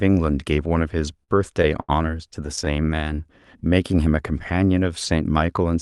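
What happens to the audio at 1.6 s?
At 1.6 s there are repeated stalls (stutter), from 1.24 to 2.68 s. Packets arrived late, so the jitter buffer kept running dry. Six times the receiver stretched the last sound, 163 ms in total. Nothing is lost, but the speech drags and stutters.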